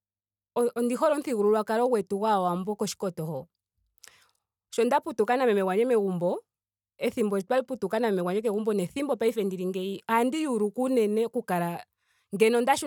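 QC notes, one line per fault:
No faults found.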